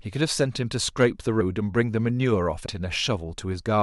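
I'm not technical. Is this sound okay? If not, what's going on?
No. Two faults can be heard. From 1.01 to 1.05 s there is hard clipping: the speech got slightly louder than the recording chain could handle, so the tops of the loudest moments were sliced flat, giving a short crackly roughness on that peak.

At 2.65 s there are compressed frames skipped: a few blocks of the compressed audio never got played, so the speech jumps ahead by roughly 70 milliseconds.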